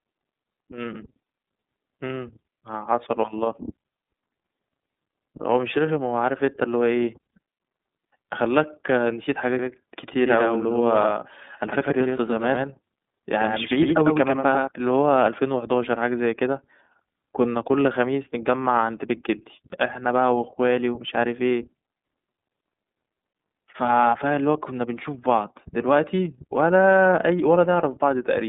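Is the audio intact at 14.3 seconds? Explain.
No. At 14.3 seconds the sound is doubled: a second full-band copy trails the original by about a tenth of a second at roughly 5 dB lower, with no reverberant tail or room colour. This doubled audio track runs from 9.59 to 14.67 s and starts and stops abruptly. It most likely comes from the same signal being captured again through a slower path, or from an edit that left two copies mixed out of step.

Underneath that, the audio sounds slightly rough and synthetic, with everything above 3.8 kHz missing and a band that sits roughly between 200 Hz and 3.7 kHz. This comes from the iLBC codec, which is present throughout the clip. It codes each 30 ms frame's excitation on its own, and that frame length suggests its 13.33 kbps mode. The codec damage is plainly audible here as well.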